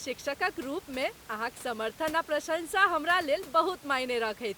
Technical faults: none

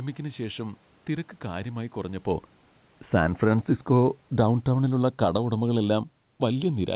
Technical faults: automatic gain falling

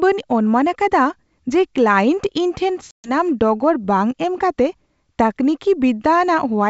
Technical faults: packet loss on an ADPCM call

